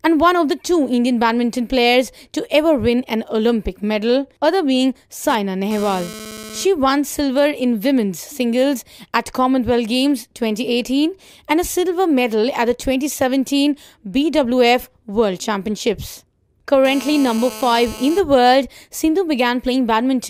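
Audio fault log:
5.29–6.65 s, GSM phone buzz: a hard, raspy buzz at 217 Hz, rich in harmonics, about 16 dB below the audio and unrelated to it. It stutters in and out rather than holding steady, which fits a nearby 2G handset exchanging data. The phone's 217-per-second transmit bursts are rectified by the audio circuitry.
16.85–18.20 s, GSM phone buzz: the same 217 Hz rasp at about 16 dB below the audio, but continuous across the whole span, as a handset on a call transmits, with each radio burst demodulated into the audio path.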